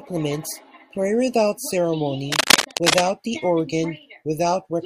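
From 2.32 s to 3.04 s, a burst of cable scratch noise runs over the speech: a dense, irregular crackling and rustling that sits a few decibels above the speech itself for roughly three quarters of a second. The likely cause is a worn cable, connector or control being disturbed, so that its contact resistance fluctuates rapidly and injects these uneven noise bursts into the signal path until the contact settles.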